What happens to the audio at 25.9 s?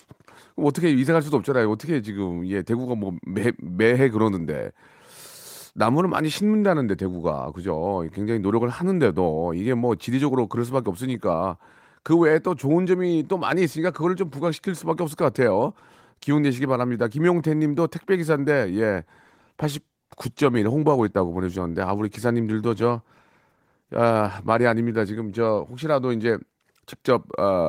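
At 25.9 s the speech carries on intact, with no dropout, click, distortion or other fault at that point.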